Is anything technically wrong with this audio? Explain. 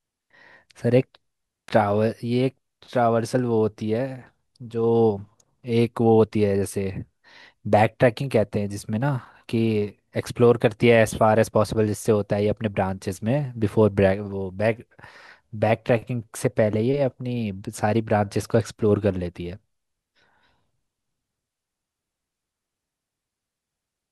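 Yes. There is an electrical switching spike at 1.68 s in this speech clip. A switch, motor or static discharge nearby likely produced a brief arc whose energy coupled into the audio line and was recorded on top of the speech. It lasts only a few milliseconds and peaks at a moderate level, roughly -20 dBFS, so it comes through as a sharp snap laid over the sound rather than as any change to the speech itself.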